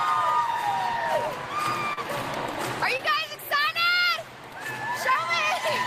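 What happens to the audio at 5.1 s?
Short concealed packet loss occurs from 5.13 to 5.16 s: about 20 ms of audio arrived too late, and the receiver patched roughly 18 ms by extending the preceding sound before blending back. It is heard as a brief smear or wobble. On a spectrogram the texture repeats or blurs briefly, and the waveform shows a looped or smoothed stretch.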